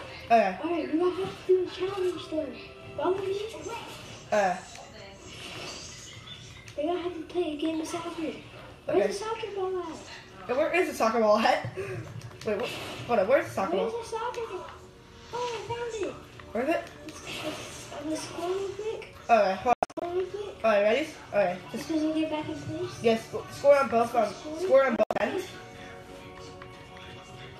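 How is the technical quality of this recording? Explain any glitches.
There are two brief glitches, both digital broadcast dropouts. At 19.73 s and again at 24.96 s, the receiver loses the signal or rejects corrupted frames and mutes. You hear a few short holes over roughly a quarter second, about 216 ms and 144 ms missing, consistent with 24 ms frames, and that audio is simply gone.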